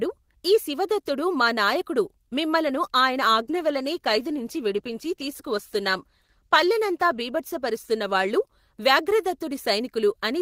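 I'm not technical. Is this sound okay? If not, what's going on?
No. From 3.4 to 8.51 seconds there's a call bitrate drop: the connection squeezed how much detail it could send, so the speech turns rough and muffled, worst for about 3.5 seconds. Unlike a dropout, the sound never cuts out.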